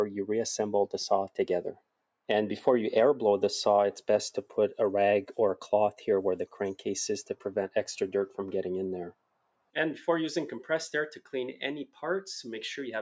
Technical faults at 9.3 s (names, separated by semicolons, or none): noise suppressor applied to music or sounds; sound cut by the noise suppressor